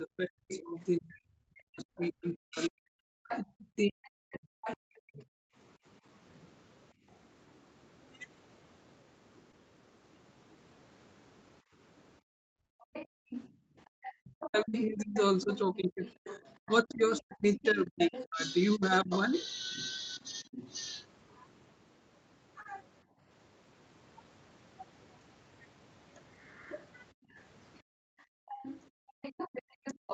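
From 0.0 to 5.19 s the echo canceller likely mistook simultaneous talk for echo and clamped the line, so speech is suppressed in double talk. The talker's level sinks by roughly 40 dB at its deepest, with about four seconds of the stretch dulled or broken into fragments.

Overlapping this, from 0.51 to 6.48 s, residual echo likely slips past the canceller, so the other side's voice leaks through, sitting around 10 dB under the talker as a second voice.

At 0.81 to 0.87 s two lost packets, 40 ms in all, are rebuilt from Opus error correction. The decoder plays the redundant low-rate copies, so nothing drops out, but the sound turns briefly grainy and noisier.

From 5.47 to 7.06 s the background is gated by the echo canceller. It pulls the microphone down by about 28 dB while playback runs, and the room tone briefly vanishes, about 0.2 s in total, before returning.

Around 9.51 to 9.55 s a short concealed packet loss leaves a 20 ms hole that the decoder bridges by extrapolating the preceding sound. 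It is heard as a quick smear or wobble.

From 12.20 to 13.93 s gating returns at up to about 38 dB, pumping the room sound out for roughly 1.5 s.

The leak reappears from 12.80 to 20.72 s at about 15 dB below the talker. Double-talk suppression follows from 14.21 to 20.44 s, dipping the talker by roughly 30 dB over about three seconds.

Inside that span, error-correction rebuilds land at 14.93 s, 16.11 s and 17.35 to 17.57 s. The last covers 120 ms, which fits six separate packets, and is a rough, noisy patch.

A second concealed loss at 22.63 to 22.67 s smears 20 ms. At 23.04 to 23.21 s a light gate of about 12 dB briefly thins the background.

From 26.46 s to the end the other voice leaks through again, about 15 dB down. Gating from 27.13 to 29.21 s drops the room by about 37 dB in bursts totalling 0.7 s. Between 28.05 and 30.10 s double talk clips the talker by roughly 40 dB for a brief 0.15 s in total.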